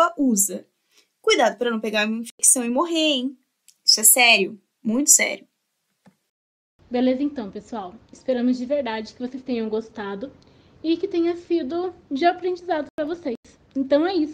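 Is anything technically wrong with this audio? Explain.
Yes, there are two instances of corrupt frame muted. Damaged compressed frames failed decoding and the player substituted silence, so the audio abruptly drops out at 2.30–2.39 s and again at 12.84–13.45 s, without shifting the surrounding timing. The longer gap suggests several consecutive lost frames.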